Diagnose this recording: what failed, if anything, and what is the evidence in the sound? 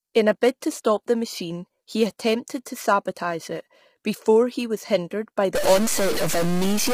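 The codec stage failed throughout. The speech is heavily damaged: rough and grainy, with noise between the pitch harmonics and a thin, synthetic top band. The likely cause is low-delay AAC compression (AAC-ELD). Its short frames smear pitch detail. The damage fits a bitrate near 24 kbps.

A converter or sample-format fault starts at 5.55 s, just after "he was hindered by", and runs to the end. Pauses fill with noise. This is likely a stuck bit. One data bit is held fixed, so about half the samples jump by that bit's weight, following the waveform.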